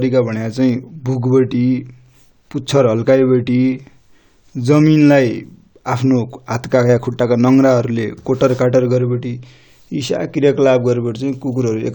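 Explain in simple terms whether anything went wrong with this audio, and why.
Nothing went wrong: the speech holds steady throughout, with no technical fault turning up at any point in the recording.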